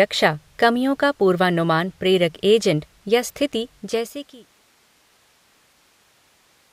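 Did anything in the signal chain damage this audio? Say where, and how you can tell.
No, nothing stood out on listening, and the smooth fade out, which begins around three and a half seconds and is complete by 4.64 s, sounds like an ordinary deliberate edit rather than damage from the chain.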